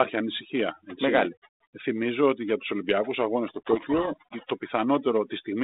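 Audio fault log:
throughout: overdone noise removal. The noise reducer is clamping hard on any frequency band near its noise estimate, so the background collapses to near silence scattered with twinkling specks, while the quieter edges of the speech are cut away too. On a spectrogram the gaps look clean and dark with isolated bright dots, and the speech shows ragged, eaten-away harmonics inside the telephone band of roughly 250 Hz to 3.7 kHz.
3.48–4.16 s: codec payload misread. For this stretch the decoder is reading the G.726 stream with the bit order of each code word reversed, so the ADPCM difference values come out wrong and the speech is buried under harsh, grinding distortion. The coding elsewhere carries only light rasp, consistent with the 32 kbit/s rate DECT uses. On the waveform the section shows dense, jagged energy. On a spectrogram it fills the band with broadband noise that starts and stops abruptly at those times.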